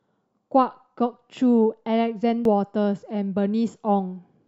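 At 2.45 s the speech gives a tiny tick, a silence of just a few milliseconds, and then picks up from a different point, so the flow of the speech jumps abruptly. This is a CD skip: a knock or a flaw on the disc threw the laser off its track onto another turn of the spiral. The player muted briefly while it lost its place, then carried on reading from that new position.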